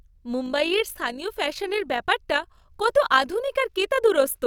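From 0.46 s to the end, overlap-add ripple sets in. Frames were rejoined with uneven overlap gain. The level dips about 6 dB around fifty times a second, giving a rough, robotic flutter.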